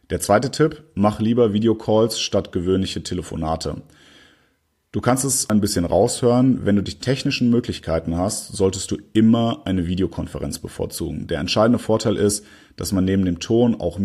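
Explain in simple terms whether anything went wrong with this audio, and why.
Nothing went wrong here: the speech comes through with no dropouts, glitches, distortion or other audible fault anywhere in the recording.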